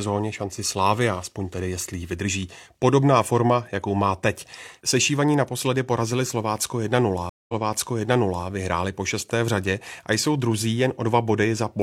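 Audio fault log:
7.29–8.46 s, stream reconnect: the speech drops out for 192 ms, then resumes about 975 ms earlier than where it broke off, so nearly a second of speech is heard again, leading into "vyhráli po šesté v". The connection failed, the player fell silent, reconnected, and started a new decoder mid-stream. The server resent a burst of already-played audio, which causes the backward jump, and the fresh decoder briefly mutes or fades in its first output.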